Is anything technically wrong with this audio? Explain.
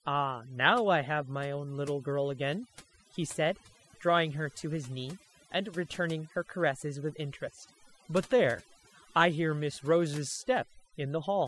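Yes. Throughout the speech there is overdone noise removal: a noise reducer set too aggressively pulls individual frequency bands down whenever they sit near its noise estimate, taking quiet speech detail along. Pauses fall to near silence with twinkling specks. A spectrogram shows isolated speckled dots in the gaps and ragged, hollowed-out harmonics.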